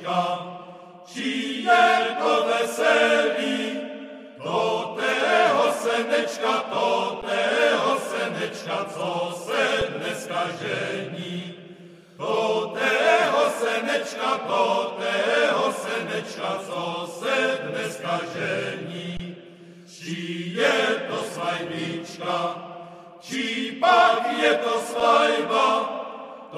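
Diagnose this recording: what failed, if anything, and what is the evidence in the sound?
Output buffer stage: underrun with held sample at 7.22, 9.81, 19.17 to 19.20 and 25.0 s. The converter holds its last value, so the sound freezes flat, then resumes softly.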